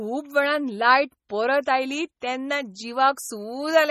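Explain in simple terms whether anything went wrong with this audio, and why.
MP3 compression runs through the whole clip: nothing above 16.8 kHz remains, and faint detail flickers, so the speech sounds watery, likely from heavy encoding.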